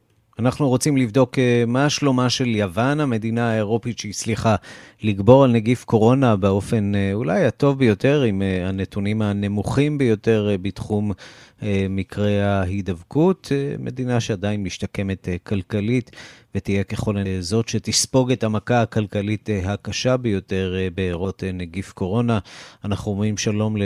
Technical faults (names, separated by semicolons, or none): damaged data in a compressed stream